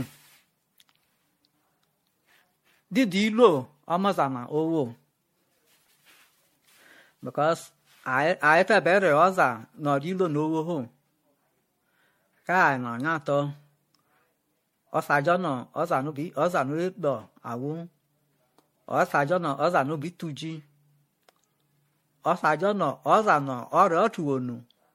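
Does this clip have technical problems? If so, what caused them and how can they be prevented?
Yes. Generation loss affects the whole clip, likely from about seven MP3 re-encodes, consistent with 64 kbit/s. This leaves hollow, swirly speech, a spectrogram pitted with holes and blank above 16.5 kHz. Prevent it by editing from a lossless master and encoding to MP3 only once.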